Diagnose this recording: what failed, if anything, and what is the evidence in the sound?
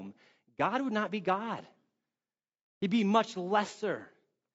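Throughout the speech the voice sounds rough and grainy, with noise filling the gaps between harmonics and a thin, artificial upper band. The codec stage is the likely fault: low-delay AAC compression (AAC-ELD), whose short frames smear pitch structure, at a rate that fits about 32 kbps.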